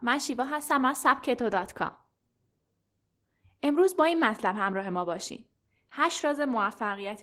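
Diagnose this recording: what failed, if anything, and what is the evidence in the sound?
The failure is at the codec stage: Opus voice compression runs through the whole speech clip. The damage is plainly audible, a slightly hoarse, robotic texture, which fits hybrid coding near 16 kbps, with SILK's coarse excitation below 8 kHz and a thin CELT layer above.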